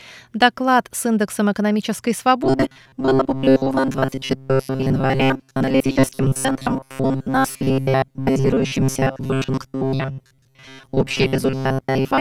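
From 2.44 s to the end, robotic sound from repeated short buffers: a rigid 133 Hz metallic buzz, most likely from looping roughly 7.5 ms chunks. Unlike dropouts, there is no silence.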